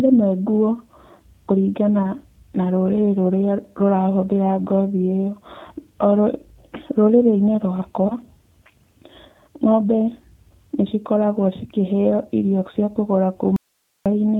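A speech recording whose audio sounds band-limited, slightly rough and synthetic throughout, with nothing above 4 kHz, the plainly audible signature of the 8 kbit/s G.729 codec rebuilding speech from a filter, pitch predictor and sparse pulses. At 2.03 to 2.06 s and again at 8.08 to 8.15 s the sound briefly smears and fades, and stays weakened just afterwards. This is VoIP packet loss concealed by the speech codec, with the decoder extrapolating across roughly 10 ms and 20 ms of missing audio. From 13.56 to 14.06 s the sound cuts out abruptly, leaving only faint hiss far below the speech level, likely an audio dropout to a faint residue.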